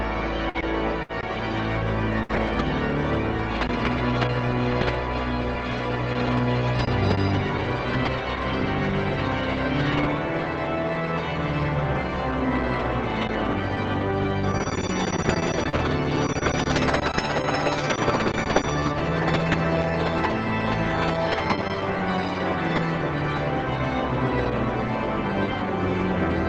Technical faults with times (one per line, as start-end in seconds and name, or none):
0.49-2.35 repeated packet loss (robotic sound)
13.28-15.65 jitter buffer speed-up
15.69-15.76 short stall from a late packet
15.73-15.79 lost packet rebuilt from error correction